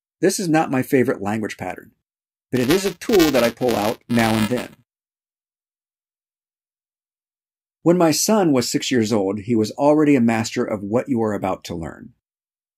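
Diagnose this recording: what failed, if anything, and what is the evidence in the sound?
Buffer tearing at the driver/buffer stage, 2.55–5.40 s: a steady 375 Hz buzz, fitting 128-sample buffers, carries slivers of roughly 7 ms-old audio. Unlike dropouts, there are no gaps.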